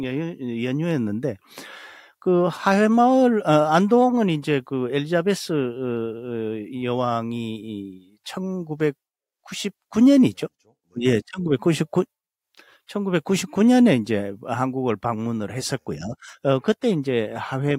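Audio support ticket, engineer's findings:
No faults found in this clip. Nothing audible points to a failing component or path.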